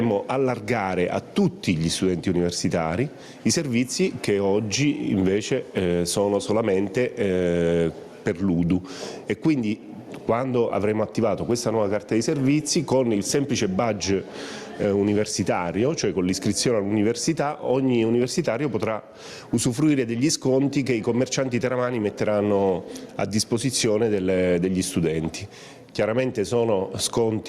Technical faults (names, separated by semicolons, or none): gain pumping